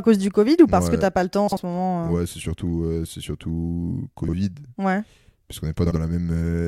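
It's a speech clip with three short bursts of frames out of order: at 1.48–1.58 s right after "t'as pas le temps", at 4.23–4.33 s after "surtout euh c'est surtout", and at 5.86–5.96 s. In each, two adjacent chunks of roughly 46 ms, which fits two codec frames apiece, got decoded in swapped order, so the snippet plays with its halves swapped. You hear a garbled flutter, but no time goes missing.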